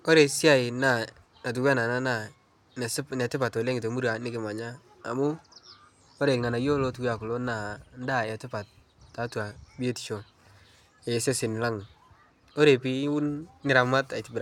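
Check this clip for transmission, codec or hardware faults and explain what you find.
No transmission, codec or hardware faults are audible anywhere in the recording.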